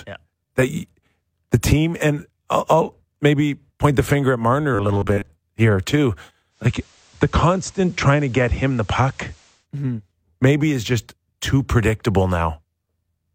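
From 4.75 to 5.29 s, just before "here too", new audio likely arrived too seldom, so roughly half the stretch is a repeated 10 ms slice of the last buffer. This is robotic sound from repeated short buffers: a rigid, metallic 100 Hz buzz that still tracks the speech loosely.

From 6.50 to 9.67 s, after "here too", the receiver lost its digital signal and cross-faded over 205 ms to the FM broadcast of the same station, then back. During this digital radio blending to analogue, the level drops by about 1 dB, and hiss sits roughly 30 dB below the speech.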